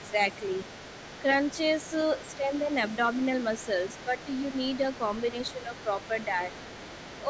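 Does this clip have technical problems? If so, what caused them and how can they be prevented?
Yes. A faint second voice, the other side's voice leaking through, runs under the speech from 0.0 to 7.29 s at roughly 20 dB below it. The likely cause is loudspeaker playback reaching the microphone and not being fully removed by the echo canceller. Using a headset, or a better-tuned echo canceller, would prevent it.

The speech is suppressed in double talk at 0.1–0.42 s, 2.21–2.71 s, 4.05–4.17 s and 5.32–5.73 s. Level briefly drops by up to roughly 10 dB in the first two and about 5 dB in the last two, while the far side talks over it. The canceller is likely treating both voices as echo. A headset, or an echo canceller with proper double-talk detection, would prevent it.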